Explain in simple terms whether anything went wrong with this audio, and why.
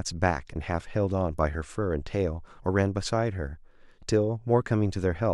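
Nothing went wrong here; the speech comes through steady and intact the whole way, with no moment where the sound breaks, jumps or gets damaged.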